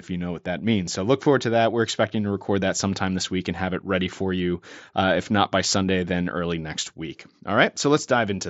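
No technical faults can be heard anywhere in the speech. The mSBC headset codec path carries the sound up to about 8 kHz, with only a light grainy texture on the louder moments.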